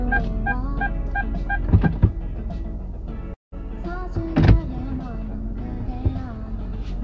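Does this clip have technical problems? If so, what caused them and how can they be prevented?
Yes. From 3.34 to 3.54 s the sound stalls: a brief trailing continuation of the last sound fades out and leaves about 160 ms of silence before the audio resumes. This is a call audio freeze, likely caused by packets held up in transit so the jitter buffer ran dry. About 180 ms of fill was inserted and nothing was lost, so everything after it plays roughly 180 ms late. Across the clip, the G.722 call path carries nothing above 8 kHz. To prevent freezes, improve network stability or allow the jitter buffer a larger adaptive margin.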